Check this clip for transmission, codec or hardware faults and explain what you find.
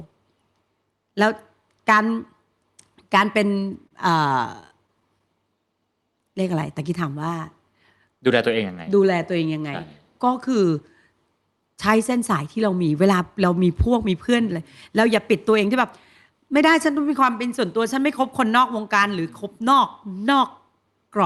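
Three kinds of transmission fault show up in this speech, all from late or bunched packets on a call path whose codec limits the spectrum to about 12 kHz.

Short stall from a late packet, at 3.59–3.63 s and 3.87–3.93 s: each time a packet arrived late, the jitter buffer ran dry and the receiver stretched the last sound by about 20 ms and then 30 ms before resuming where it left off. Nothing is lost, but a sound is held slightly too long, with a slight buzz or dip. On a spectrogram, the harmonics run flat and unchanging for that instant. The waveform shows a briefly repeating periodic pattern.

Scattered short gaps, from 4.29 to 5.22 s: about seven isolated packets were late or lost across this stretch, and each hole was patched by continuing the preceding sound. Together these patches fill about 70 ms, and the longest is about 15 ms. The result is a series of tiny ticks and smears over otherwise clear speech. 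A spectrogram shows small vertical blurs or frozen slivers dotted through the stretch. The waveform has brief discontinuities in the periodicity.

Jitter buffer speed-up, from 19.44 to 20.08 s: the buffer held more audio than it aims for. The receiver trimmed out pitch-period-sized pieces, about 40 ms in total, so playback ran at about 105% speed with the pitch unchanged. The phrasing sounds slightly hurried. The spectrogram keeps the harmonic spacing but compresses the timing. The waveform shows slightly shortened syllables with no gaps.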